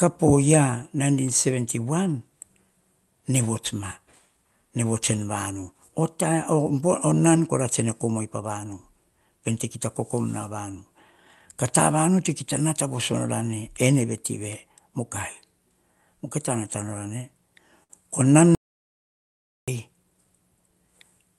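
At 17.83 to 17.92 s there is a short stall from a late packet. A packet missed its slot, so the receiver stretched the last speech sound by about 62 ms and then resumed without skipping anything. It is heard as a held syllable with a slight buzz or dip. A spectrogram shows smeared, repeated harmonics, and the waveform shows a looped stretch.

From 18.55 to 19.68 s comes an audio dropout to silence. The speech cuts off abruptly, and about 1.13 s is lost as silence with no room tone, likely from the input link failing or a brief mute. The waveform is a flat line, and the spectrogram is a fully black vertical band. The Opus call path's content stops near 12 kHz.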